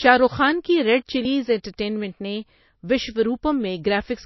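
Throughout, the speech stops dead above 5.8 kHz and carries smeared codec artefacts. It is likely low-bitrate MP3 audio saved at a high bitrate, with the losses kept.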